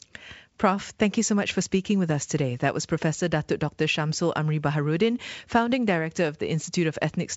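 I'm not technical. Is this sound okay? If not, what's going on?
Yes, nothing in this speech recording stood out as a problem when I listened to it.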